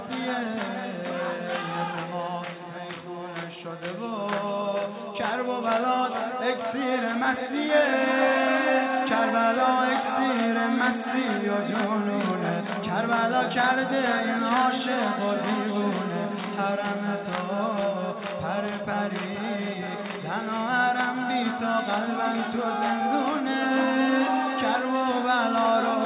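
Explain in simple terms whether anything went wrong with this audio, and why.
Nothing went wrong with this recording. Listening all the way along, there is no moment where the sound breaks or changes in a way that needs explaining.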